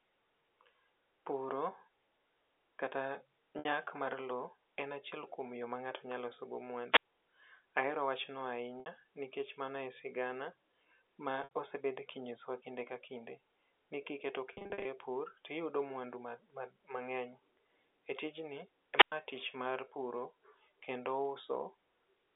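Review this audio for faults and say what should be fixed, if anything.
Packet loss with pitch repetition occurs four times. At 3.59 s, just before "mar lo en achiel", about 60 ms is bridged by repeating the last pitch period, giving a brief held, buzzy tone. Similar 60 ms and 70 ms patches follow at 8.80 s and 11.44 s. From 14.53 to 14.85 s, losses totalling 240 ms are scattered across 320 ms, with the longest run 50 ms. The gap sizes fit 10 ms packets. A larger jitter buffer, forward error correction, or a less congested network path would prevent these losses.

Wireless microphone squelch dropout occurs twice. At 6.92 to 7.03 s, right after "ng'ato nya loso go", hiss rises as the FM signal fades, then the receiver's squelch mutes the output for about 67 ms before the voice returns. At 18.95 to 19.12 s, just before "tich mar puro", the same sequence produces a mute of about 104 ms. Throughout, the speech has the narrow 300 Hz to 3.6 kHz band of the G.711 telephone line. 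Shortening the transmitter-to-receiver distance, fixing antenna placement, or using diversity reception would keep the signal above the squelch threshold.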